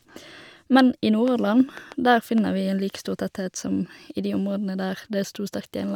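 From 1.28 to 2.39 s, a train of clicks ticks over the speech. About four similar pops arrive unevenly, roughly 2.7 per second, standing well above the voice. Likely interference or a faulty connection.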